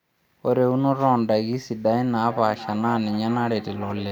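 From 2.13 s to the end, a feedback echo between two devices appears. A nearby device replays the speech, this microphone recaptures it, and the speech returns about every half second, about 16 dB down. Spectrograms show faint, evenly spaced copies trailing each syllable.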